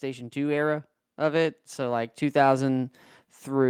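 From 0.05 s to the end of the clip the automatic gain rising fault is present. The gain stage judged the speech input too quiet and kept turning itself up, so the voice and the background noise between syllables grow louder together over more than three seconds. On a waveform the envelope widens steadily from left to right; on a spectrogram the whole frequency range, noise floor included, brightens gradually across time.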